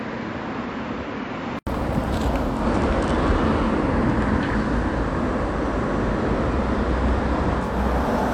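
From 0.0 to 1.67 s the sound is dull, a few dB quieter and faintly noisy, then an 80 ms gap; likely an input switched to a poorer device.

From 2.42 to 7.80 s, faint hiss appears and level shifts about 2 dB, as digital radio blends to analogue FM over 258 ms.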